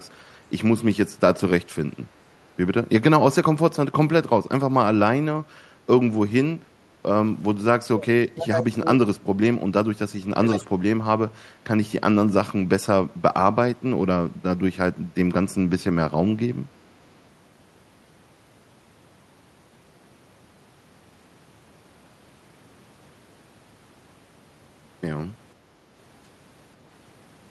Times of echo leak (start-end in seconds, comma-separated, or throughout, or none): 10.44-10.67